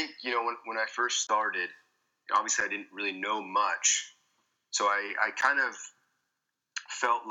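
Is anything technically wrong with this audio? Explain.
Yes. Blocks of digital silence occur at 1.27–1.29 s (20 ms), 2.61 s (7 ms) and 5.41 s (12 ms). The signal drops straight to zero and returns with no fade; the first gap leaves a brief hole, while the two shorter ones come across as a tick or dip. The last gap fits an unfilled 512-sample buffer.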